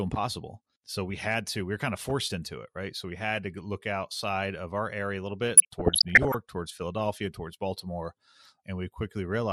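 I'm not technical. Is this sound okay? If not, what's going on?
No. There are two problems.

The whole recording sounds dull and muffled, as if the top end of the sound were missing. The speech has a grainy, gurgling edge. The cause is most likely MP2 compression, an older digital radio format. To save space, it throws away the highest sounds. What it keeps is stored roughly, and that is where the graininess comes from. Here the damage is easy to hear.

From 5.57 to 6.34 seconds, just after "area a little bit", there is DAB burbling. For a moment the sound turns bubbly. This happens when a digital radio signal is weak. A small share of the received data arrives corrupted, and the radio can't fix it all. The wrong data then puts short blips of noise into parts of the sound, which makes the bubbling noise.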